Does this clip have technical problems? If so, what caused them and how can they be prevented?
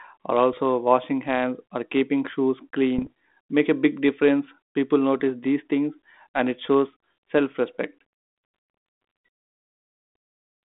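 Yes. Brief pops and rough, level-jumping bursts occur at 0.53 s, from 2.98 to 3.08 s right after "or keeping shoes", and at 5.2 s just before "these things". These are bit errors on an ADPCM link, the 32 kbit/s G.726 path. Bits flip at about a tenth of a percent in the first two bursts and about 0.03 percent in the last, and each one throws off the decoder's step size and prediction, so the disturbance rings on for a few milliseconds. A cleaner radio link or error protection on the channel would prevent them.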